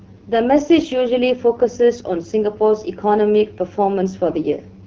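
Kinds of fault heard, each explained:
AMR wideband (HD Voice) codec: The speech runs through AMR-WB, which models the vocal tract and drives it with coded pulses up to 6.4 kHz, then fills the band from there to the edge with shaped noise. Nothing is present above 7.1 kHz. The damage is plainly audible: the speech sounds rough and raspy throughout, which fits one of the codec's two lowest modes, around 8.85 kbit/s.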